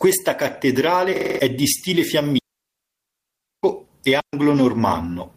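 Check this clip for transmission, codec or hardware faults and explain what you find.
Two kinds of fault are present: a system hang loop and two digital wireless dropouts.

From 1.16 to 1.39 s, a system hang loop occurs. The computer or driver stalled while the hardware kept replaying one ring buffer. A 46.4 ms slice repeats five times at 21.5 Hz, which fits a 2048-sample buffer. It sounds like a rough, rapid stutter. About a fifth of a second of speech goes missing.

Digital wireless dropouts occur from 2.38 to 3.63 s and from 4.20 to 4.33 s. The link lost too much data, so the receiver muted with a very quick fade. The first hole lasts 1.25 s and the second 0.13 s. Both are clean near-silence, with no noise burst at either edge.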